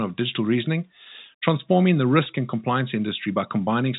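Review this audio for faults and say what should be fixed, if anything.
No faults; nothing to fix.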